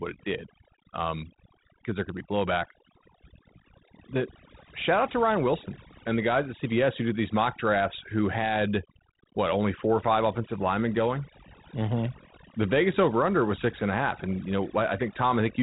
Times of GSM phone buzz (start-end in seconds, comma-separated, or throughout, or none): none